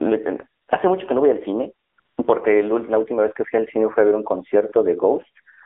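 A speech recording carried over the AMR narrowband mobile codec. The band is confined to about 300 Hz to 3.5 kHz, and the voice has a plainly audible buzzy, synthetic quality. That quality points to a low coding mode near 7.4 kbps, where few excitation pulses per subframe are available to rebuild the waveform. AMR comfort noise appears three times, at 0.62 to 0.68 s, 1.88 to 1.98 s and 2.00 to 2.18 s. In each gap the transmitter stopped sending speech frames for 60, 100 and 180 ms respectively. The receiver filled those gaps with smooth synthetic noise that switches in and out against the real background.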